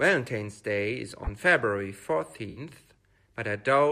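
At 1.24 to 1.29 s and again at 2.50 to 2.60 s the speech has a corrupt frame concealed: the decoder caught damaged AAC frames and covered them, over spans whose lengths suggest about two and three frames.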